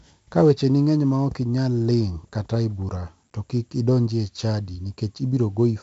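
4-bit ADPCM compression runs through the whole speech clip. Each sample is coded as a coarse 4-bit step from a prediction, leaving a gritty hiss riding on every loud syllable and roughness on sharp onsets. Nothing above 7.7 kHz survives, which fits a 64 kbps stream.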